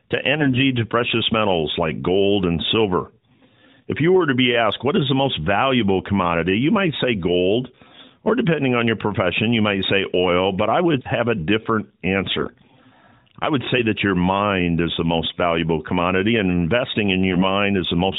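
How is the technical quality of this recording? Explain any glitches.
Two brief patches of AMR bit errors on a narrowband mobile-codec line, whose 4 kHz ceiling and light buzz fit AMR-NB around 12.2 kbps. At 0.40–0.60 s, just before "to precious metals like", and at 17.33–17.43 s, right after "valuable commodity and investing", a few percent of the weakly protected frame bits flipped. Pitch and level hold, but the sound goes hoarse and gargly.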